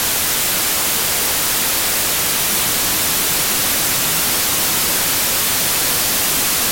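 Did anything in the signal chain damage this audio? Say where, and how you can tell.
Yes, a wrong sample width at the sample-format conversion stage. Audio written as 32-bit integers was read as 16-bit, splitting each sample into two values. Throughout, the sound plays at half speed, an octave low, buried under loud noise from the meaningless low halves.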